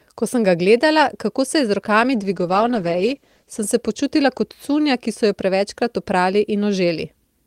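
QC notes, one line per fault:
2.00–3.69 s, call bitrate drop: the speech turns coarse and muffled, with the top end cut away, for about 1.6 s before clearing. The encoder was given far fewer bits, consistent with a fall from around 32 kbps to about 13 kbps.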